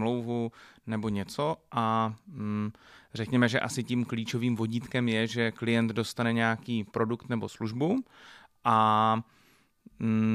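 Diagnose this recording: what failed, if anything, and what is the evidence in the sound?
Nothing in this speech recording points to a failure at any stage of the chain. No event in the sound needs a diagnosis.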